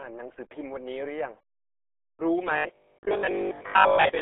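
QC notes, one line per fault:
Throughout, RealAudio 14.4 codec: the speech is squeezed into a phone-like band from 300 Hz to 3.6 kHz, with nothing above 3.9 kHz, so it's muffled and gargly. The heavy smearing fits an 8 kbit/s dial-up-era speech codec rebuilding everything from sparse data.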